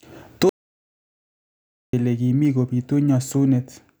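Speech, with an audio dropout to silence from 0.49 to 1.93 s: 1.44 s of sound vanishes, likely a lost input link, showing as a flat, empty band in both spectrogram and waveform.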